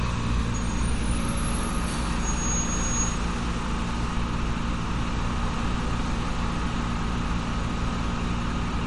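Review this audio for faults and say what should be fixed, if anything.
Throughout, the audio stops dead above 11.2 kHz and sounds watery and swirly, likely from MP3 compression at about 48 kbps. A spectrogram shows a hard ceiling with flickering gaps beneath. Keep a lossless master or encode at a much higher bitrate.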